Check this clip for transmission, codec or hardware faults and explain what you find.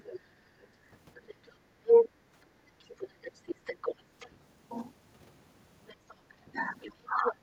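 Three echo-cancellation faults are present, all tied to the loudspeaker-to-microphone path and how the echo canceller handled it.

Other side's voice leaking through, 0.05–2.09 s, 2.79–4.3 s and 5.87–7.33 s: a second voice comes through alongside the speech, likely residual loudspeaker echo. It is louder than the talker at first, then roughly 10 dB below, then about level with it.

Background gated by the echo canceller, 2.46–2.57 s: the canceller pulled the microphone down while the loudspeaker played, so the room sound briefly dips by about 9 dB for roughly a tenth of a second.

Speech suppressed in double talk, 6.51–7.42 s: with both sides talking, the talker's voice dips in pieces, about 25 dB at worst and around half a second in total, likely because the canceller attenuated everything.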